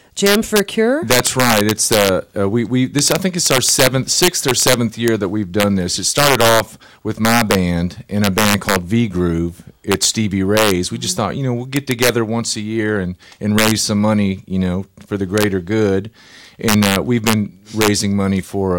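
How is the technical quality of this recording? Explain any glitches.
The recording is marred by integer overflow on its loudest speech. Throughout the clip, peaks that were driven about 6 dB too hot wrap around instead of being limited. A value past the integer ceiling jumps to the opposite extreme. Only a small fraction of samples go over. But each one flips across the full range, producing violent, sharp cracks on loud syllables, harsher than ordinary clipping.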